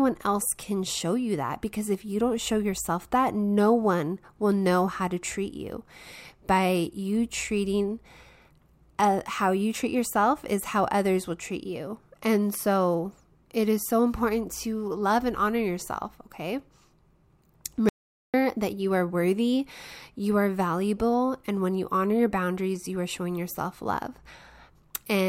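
Speech, with an audio dropout to silence from 17.89 to 18.34 s: about 0.45 s of silence, likely from the input briefly disconnecting or muting. Unlike a natural pause, no room tone remains, and the sound resumes abruptly at "that you are worthy".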